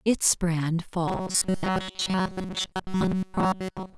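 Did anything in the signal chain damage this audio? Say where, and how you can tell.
Yes, likely a driver buffer fault: from 1.08 s onward, robotic sound from repeated short buffers, with 5.3 ms loops forcing a 188 Hz buzz, seen as rigid, evenly spaced spectrogram stripes.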